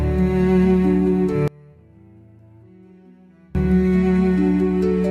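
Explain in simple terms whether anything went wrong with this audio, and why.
From about 1.48 to 3.55 seconds, the sound suddenly drops away to almost nothing, then comes back. It doesn't fade. It nearly vanishes. The likely cause is one channel inverted. In a stereo recording, one side has been flipped upside down. When the two sides are combined into one, everything they share cancels out. Only the small differences between the sides survive. That leaves a faint trace until the normal sound returns.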